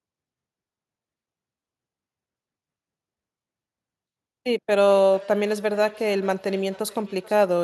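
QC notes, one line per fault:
4.89–7.63 s, feedback echo between two devices: a second device on the same call replays the far end, that microphone recaptures it, and neither echo canceller removes the other's output, so the speech returns roughly every 0.4 s, peaking about 23 dB below the speech.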